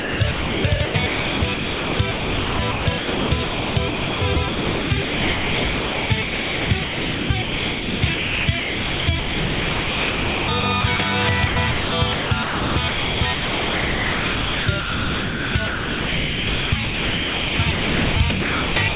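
From the start to 10.99 s, and again from 11.47 s to the end, the sound is chopped by the voice detector: about 8.3 s of the first stretch and 6.0 s of the second come out as comfort noise instead of the real signal. The likely cause is the sender's voice detector repeatedly deciding nothing worth sending was there, so you hear choppy fragments, all capped at 4 kHz by the G.711 call path.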